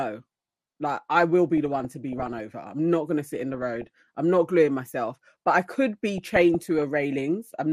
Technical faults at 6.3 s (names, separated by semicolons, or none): MP2 compression; DAB burbling